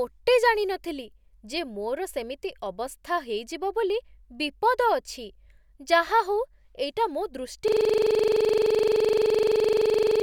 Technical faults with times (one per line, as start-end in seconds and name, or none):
7.68-10.22 system hang loop